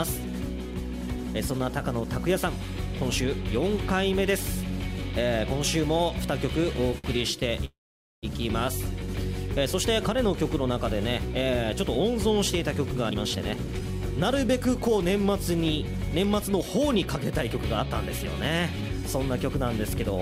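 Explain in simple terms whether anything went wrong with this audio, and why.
At 6.98 to 7.07 s there is a short stall from a late packet. One piece of the audio stream reached the listener's device after it was needed, so the device briefly ran out of sound to play. To cover the gap it stretched the last bit of sound for about 56 ms, then carried on from the same place. Nothing is lost, but that moment sounds held a little too long.

From 7.65 to 8.26 s the sound does what a call audio freeze does. The likely cause is that a longer run of packets was held up on the way. The device kept the last sound going briefly, and then there is about half a second of silence. When the audio returns it picks up where it stopped. Nothing is skipped, but roughly 0.58 s of waiting has been added.

A jitter buffer speed-up follows, as the device works off the extra delay it has built up by trimming many tiny slices out of the audio. 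From 13.09 to 13.82 s it plays at about 126% speed and removes around a fifth of a second. Milder catch-ups at about 107% come at 14.49 to 14.89 s, 16.25 to 16.63 s and 17.50 to 19.50 s. The pitch stays the same, but the sound feels hurried in those stretches.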